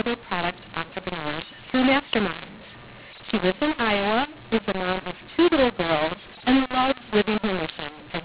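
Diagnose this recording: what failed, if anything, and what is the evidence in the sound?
Mu-law and A-law mixed up, throughout: a codec-stage fault. A-law telephone speech is decoded as mu-law, scrambling levels into harsh distortion and lifting pauses into noise.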